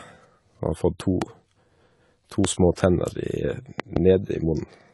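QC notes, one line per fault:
Throughout, AAC compression: the speech is dull and smeared with plainly audible codec damage, and nothing is present above 11.5 kHz. This is likely AAC-LC coding at a low bitrate, in the region of 32 kbps. The coder quantises each frame's frequency lines against a hearing model, dropping the top band and either leaving spectral holes or filling them with substitute noise. Unlike a plain low-pass filter, it adds a warbling, fizzy texture to sustained sounds and sibilants.
1.22–1.24, 2.45–2.47 and 3.80–3.99 s, loud pop: the first two are single pops, and the third span holds two in quick succession. Each peaks roughly 15 dB above the speech. A sudden voltage step or pulse, likely from a plug, switch, static discharge or driver glitch, was added to the signal and shaped by the circuits after it. Unlike a dropout or an edit click, the speech carries on underneath each pop without a gap.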